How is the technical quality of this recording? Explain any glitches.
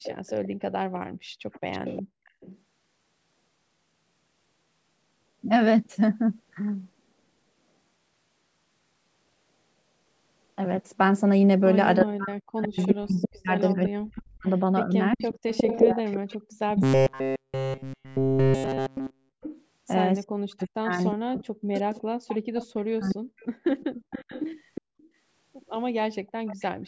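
The recording is marred by three kinds of glitch, spread across the start, the middle section and the very end. The deepest bass is trimmed by ordinary call microphone processing.

Echo leak, 0.03 to 2.58 s, 12.63 to 24.81 s and 26.46 to 26.64 s: a faint delayed copy of the speech trails the original by 360 ms, sitting about 15 dB below it, and about 20 dB below in the brief final burst. It sounds like a second voice lagging behind. The likely cause is a loudspeaker on the far end whose echo canceller let part of its microphone pickup through and sent it back.

Speech suppressed in double talk, 12.05 to 23.36 s: the talker's level repeatedly sinks, at worst by around 40 dB, so stretches of speech fade or drop out. The dips total roughly 7 seconds within that span. This likely happened because both sides were sounding at once, and the echo canceller, unable to tell the local talker from loudspeaker echo, turned everything down.

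Robotic sound from repeated short buffers, 16.83 to 19.38 s: the speech turns into a rigid metallic buzz pitched at 133 Hz that only loosely tracks the syllables, and nearly the whole stretch is made of repeats. The likely cause is audio arriving too late, so the playback looped the last fragment instead of the real signal. The buzz pitch fits a repeated chunk of about 7.5 ms.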